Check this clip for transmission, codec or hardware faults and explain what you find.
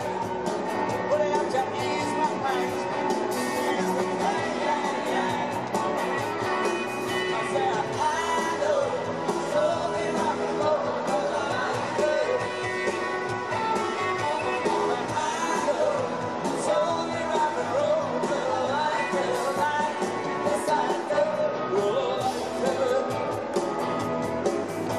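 No transmission, codec or hardware faults turn up in this clip.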